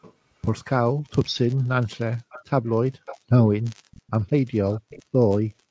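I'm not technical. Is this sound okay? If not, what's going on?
No. Faint, delayed copies of the speech slip in at 0.02, 2.3, 2.66, 3.06, 3.91, 4.27 and 4.71 seconds, each trailing the original by about 0.46 seconds. Most are barely there. The one at 3.06 is the easiest to notice, with 2.3 and 4.71 close behind. This is echo leak, most likely from one side of a call playing through a loudspeaker, where the echo canceller failed to remove everything its microphone picked up and sent scraps back.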